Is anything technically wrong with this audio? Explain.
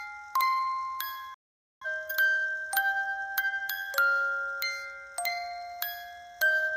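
Yes. There is a digital broadcast dropout from 1.34 to 1.86 s. The sound fades to silence in about 3 ms. It stays muted for roughly half a second, then picks up again further along. The receiver stopped getting usable data, or the frames failed their checksum, so it muted until clean frames arrived. The gap of about 470 ms fits around eleven lost frames. The audio from that stretch is gone, not delayed.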